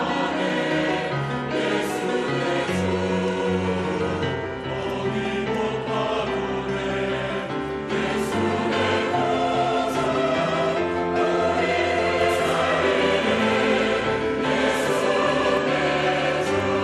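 From 12.21 to 15.57 s the audio carries a doubled audio track: a full-band copy about as loud as the original trails it by roughly 150 ms, likely from a second, slower capture path. Unlike an echo or reverb, it has no decay or room colour and starts and stops abruptly. Overlapping its end, from 15.17 to 15.23 s, comes DAB burbling, a brief patch of noise blips that spans what sounds like a few MP2 frames, consistent with a low rate of uncorrected bit errors. It is distinct from a dropout because short blips of noise land in single sub-bands rather than the sound going silent.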